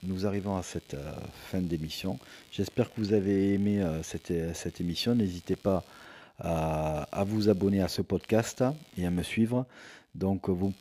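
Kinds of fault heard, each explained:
Computer activity noise: a faint buzzing chirp, pulsing at about 70 per second and sitting roughly 30 dB below the speech, runs through the whole clip independent of the talking. Processor or peripheral load swings are disturbing the shared ground of the audio circuit.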